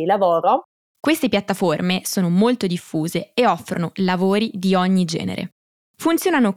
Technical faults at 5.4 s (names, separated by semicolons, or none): none